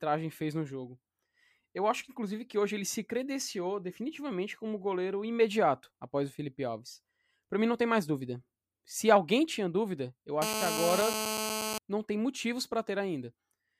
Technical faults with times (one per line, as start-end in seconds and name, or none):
10.42-11.78 GSM phone buzz